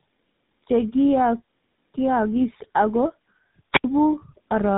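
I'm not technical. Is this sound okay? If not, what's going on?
No. Throughout, the speech sounds rough, muffled and warbly, with no crisp high end; nothing comes through above about 3.8 kHz. This is tandem speech coding. The call passed through two different phone-network speech compressors in a row, first one type and then GSM full rate. Each one squeezed the sound again after the last had already worn it down, so the damage stacked up.

Near the end, from about 3.72 to 3.84 s, there is a brief burst of hiss followed by a gap of near silence lasting about 77 milliseconds, and then the speech returns. This is a wireless microphone squelch dropout. The radio link from the microphone weakened for a moment, and the receiver shut its output off completely rather than play the static.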